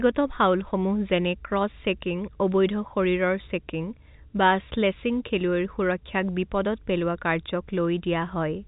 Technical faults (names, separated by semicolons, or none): none